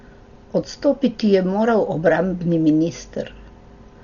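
From start to finish, the speech is heavily degraded. Nothing is heard above 7 kHz, so it sounds dull and muffled. A rough, fluttering noise clings to the voiced tones instead of a clean tail. The likely cause is Dolby Digital compression at a low bitrate, perhaps near 40 kbps. The encoder narrowed the band and gave many frequency lines no detail at all. The decoder then filled those gaps with noise, which produces the flutter.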